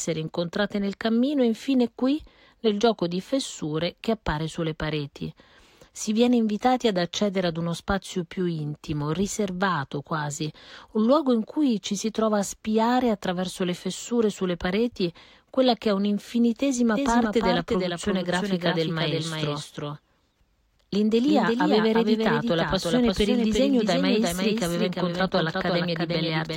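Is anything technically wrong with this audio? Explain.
Yes. From 16.96 s to the end, the sound is doubled: a second copy trails the original by roughly 400 ms, only a few decibels quieter, full-band and completely dry, with no decay or room colour. It cuts in abruptly rather than building like an echo. This doubled audio track is likely the same signal reaching the mix twice, either through a second, slower capture path or an edit that left two out-of-step copies overlapping.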